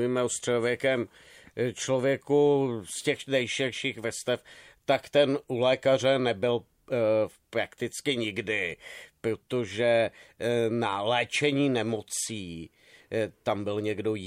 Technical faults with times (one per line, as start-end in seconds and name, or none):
none